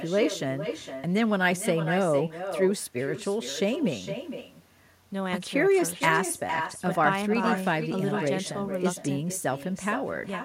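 Throughout the clip, the speech carries an echo with no canceller: the far end is evidently playing the call over a loudspeaker, its microphone recaptures it, and nothing subtracts that return path. Each phrase comes back about half a second later, roughly 8 dB quieter and thinner. On a waveform, every burst of speech has a smaller delayed twin; a spectrogram shows each syllable's pattern repeated, fainter, about half a second to the right.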